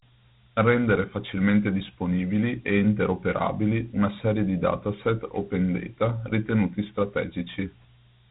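Throughout the clip the speech has passed through Dialogic VOX ADPCM, the 4-bit adaptive coding used for phone menus and voicemail, here at a rate that fits 32 kbps and an 8,000-sample-per-second stream. Each sample is stored only as a coarse step from a predicted value, so the coder trails the waveform. The result is a plainly audible gritty hiss that rides along with the speech, and nothing is left above 3.8 kHz, giving a narrow telephone-band sound.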